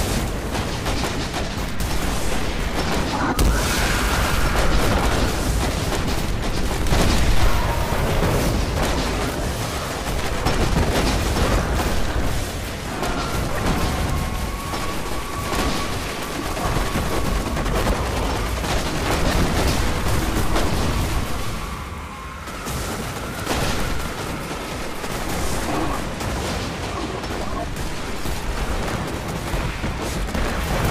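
From 6.92 to 7.56 s the loudest moments crackle, a gritty edge that sits only on the peaks. This is hard clipping. For that stretch the signal ran about 2 dB hotter than a stage in the chain could pass, so the top of each peak was sheared off flat. Those squared-off tops add harmonics high in the spectrum, which is what gives the peaks their crackle.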